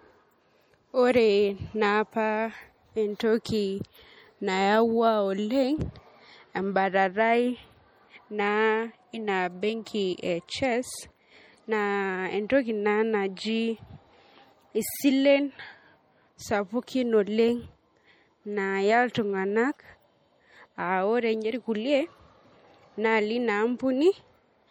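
MP3 compression damage runs throughout: starved frequency lines flicker between frames, making the speech plainly watery and swirly, likely from MP3 at a rate that fits 48 kbps.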